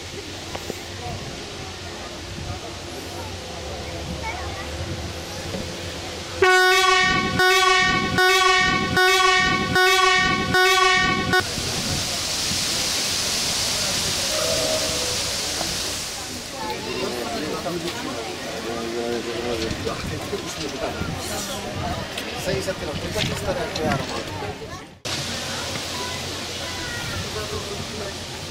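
From 7.39 s to 11.40 s the audio falls into a broken-record loop: a fragment about 0.79 s long plays five times back to back, identical each pass, and whatever should have followed in those four seconds never arrives. The likely cause is a stalled player or stream that kept resending its last buffered piece. On a waveform the same envelope shape repeats at a steady 0.79 s spacing; a spectrogram shows an identical block tiled across that span.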